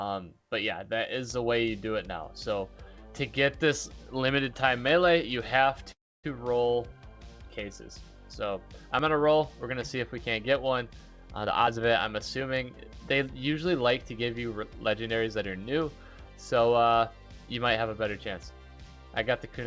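From 5.92 to 6.26 s there is a call audio freeze, likely caused by packets held up in transit until the jitter buffer ran dry. The receiver filled the wait by stretching the last sound for about 317 ms. It decays into roughly 280 ms of silence before the audio resumes exactly where it stopped. Nothing is lost, but a gap has been inserted and everything afterwards arrives about a third of a second later.

At 8.99 s there is a dropped buffer (overrun), where the software likely failed to read its samples before the hardware overwrote them. Around 20 ms of audio is discarded and the remaining edges are butted together with no silence between them. The result is a small forward jump in the sound.

Two jitter buffer speed-up passes follow, each trimming stored audio to bring the delay back down. The receiver cuts out short pitch-period slices repeatedly while keeping the pitch unchanged. From 11.44 to 11.81 s playback runs at 155 percent, removing about a fifth of a second, so the sound is noticeably rushed. 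From 13.13 to 13.82 s it runs at 105 percent, removing a few tens of milliseconds, enough that it already sounds hurried. Throughout, the G.722 call path at 64 kbps leaves nothing above 8 kHz.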